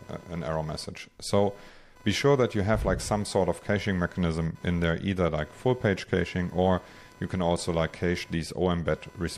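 The audio carries computer activity noise from start to finish: a buzzy, chirping pulse train at roughly 500 Hz, sitting around 25 dB below the signal. It follows processor, graphics or mouse load modulating the shared ground, not the sound itself.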